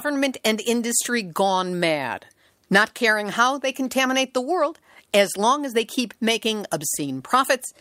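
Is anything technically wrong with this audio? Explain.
No, nothing is technically wrong with this audio.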